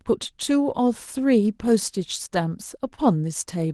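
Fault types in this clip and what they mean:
Short concealed packet loss: from about 2.95 to 2.99 s, roughly 20 ms of the speech arrived too late for the decoder, so the receiver synthesised about 18 ms to cover the gap by extending the preceding sound from its last pitch or noise shape, then cross-faded back into the real signal. The result is a brief smeared, wobbly blip in the speech, heard over a call path whose top end stops near 12 kHz.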